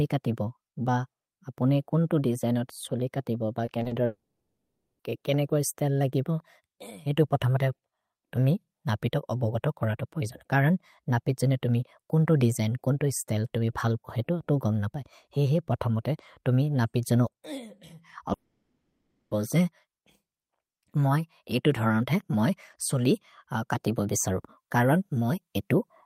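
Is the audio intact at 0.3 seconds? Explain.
Yes, at 0.3 seconds the speech plays through intact, with no dropout, click, distortion or other fault at that moment.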